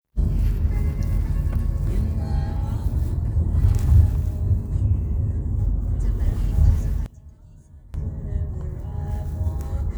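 One channel inverted, 7.06 to 7.94 s: the sound suddenly drops by about 19 dB, leaving only a faint copy. The likely cause is one stereo channel with reversed polarity, so whatever both channels share cancels when summed.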